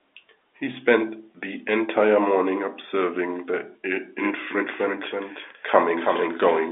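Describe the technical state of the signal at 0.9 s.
At 0.9 s the audio is intact, with only the ordinary G.711 telephone band of the line audible, which passes nothing above about 3.7 kHz.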